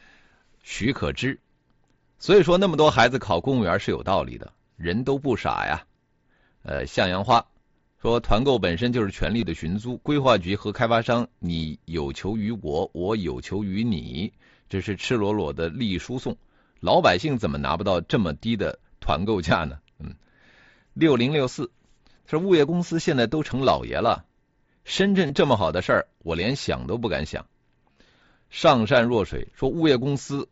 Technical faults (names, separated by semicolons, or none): concealed Bluetooth headset packet loss